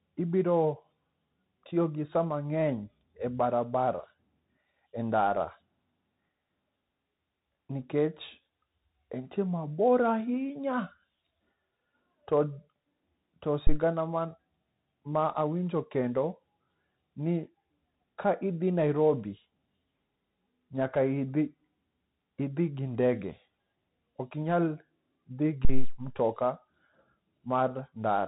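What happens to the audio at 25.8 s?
At 25.65 s a phantom power thump hits and runs to about 26.02 s. A supply voltage switched on a live input sends a step through the coupling capacitors, producing a deep low-frequency thump that dies away with a decay of about 84 ms.

Underneath it, as across the whole recording, the Bluetooth CVSD headset codec is plainly audible. This is a one-bit delta modulator with an adaptive step, consistent with a 64 kbps stream. It cuts everything above 4 kHz, roughens sibilants and leaves a granular hiss beneath the speech.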